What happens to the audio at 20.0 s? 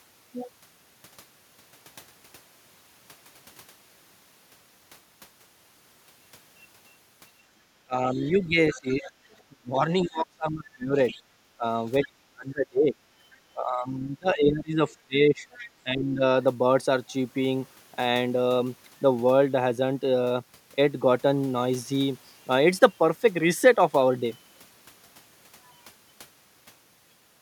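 At 20.0 s the speech carries on intact, with no dropout, click, distortion or other fault at that point.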